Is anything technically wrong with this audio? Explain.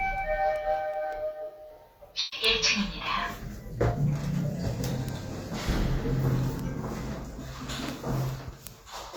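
Yes. Two faults are audible.

Word clock ticks run from 0.18 s to 9.05 s. A digital link is being read by a receiver on its own clock, not locked to the sender. The two clocks differ by around 100 ppm, so they slip past each other about every fifth of a second. At each slip a sample is dropped or repeated, which fits a single-sample error each time. The result is around fifty sharp ticks of uneven strength at a steady rate across the whole clip.

AAC frame loss with concealment occurs from 2.19 s to 2.46 s. About 128 ms of coded audio never reached the decoder, which fits roughly three lost AAC frames. The decoder filled the gap by reusing the last good spectrum with altered phase and energy. That keeps the sound going instead of leaving a hole. The patch comes out smeared and noisy, with a phasey quality, before normal decoding resumes.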